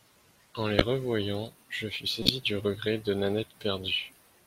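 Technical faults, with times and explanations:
0.78–0.82 s and 2.22–2.32 s, corrupt frame decoded: a few compressed frames arrived with flipped bits and the decoder played them anyway. Misread gains and codes put energy at the wrong frequencies, so each hit is a chirp, blip or burst of noise peaking around -5 dBFS. The first comes just before "revoyant je fus", the second between "revoyant je fus" and "du regret de". Each lasts only as long as the damaged frames.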